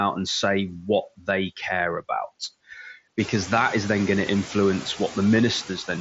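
Noise suppressor artifacts run through the whole speech clip. The suppressor pulls steady noise down by about 16 dB in gaps, so the background pumps between phrases. This is clearest after the room noise rises around 3 seconds, and the band-limited mSBC headset sound stops near 7.7 kHz.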